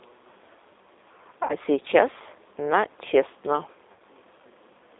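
Throughout, the speech carries G.729 codec damage, and it is plainly audible. The band is cut to about 300 Hz to 3.7 kHz, so the sound is thin and boxed in. The codec rebuilds each short frame from a vocal tract filter, a pitch predictor and a few pulses. That model leaves the speech rough and faintly synthetic, which fits an 8 kbit/s G.729A coder.

From 1.43 to 1.55 s, VoIP packet loss is concealed by the speech codec. About 60 ms of audio is missing, which fits three lost packets. The decoder fills the gap by repeating its last pitch and filter, with the gain falling each frame. The speech stretches into a fading sound. It stays weak for a moment after real audio returns.

From 3.92 to 4.02 s, the same concealment happens again. About 80 ms is lost this time, which suggests four packets. The smeared, decaying sound is longer here.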